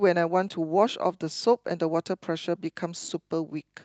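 No faults to report: the speech comes through the WebRTC call path with its top end rolling off around 8 kHz, consistent with the codec's bandwidth setting.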